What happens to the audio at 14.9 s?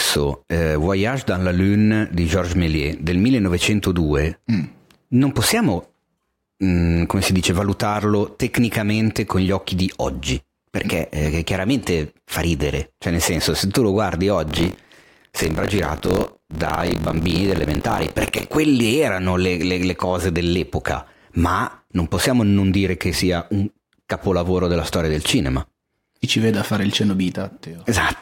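Buffer tearing runs from 14.46 s to 18.57 s, starting just after "se tu lo guardi" and clearing before "erano le le le". The playback writer and the hardware reader have drifted so that they cross within every period. A slice of each buffer, roughly a seventh, replays audio from about 40 ms earlier, bounded by hard splices. The result is a steady robotic rattle at 46.9 Hz, consistent with a 1024-sample buffer, heard only while sound is present.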